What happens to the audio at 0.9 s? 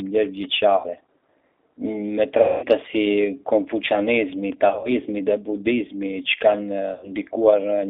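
Just before 0.9 s, packets went missing on the VoIP link, and the speech codec covered the gap with packet loss concealment. From 0.76 to 0.89 s the decoder rebuilt about 80 ms of audio, consistent with four lost packets, by reusing its last pitch and vocal tract filter at falling gain. That span sounds stretched into a buzzy tone or coloured noise that fades. Because each frame depends on the one before, the sound at 0.9 s is still weak or distorted as the decoder recovers.

Underneath this, the whole clip runs through the G.729 codec at 8 kbit/s. The line passes only about 300 Hz to 3.6 kHz, so the sound is muffled, and rebuilding speech from a few pulses per frame gives it a rough, synthetic edge that is plainly audible.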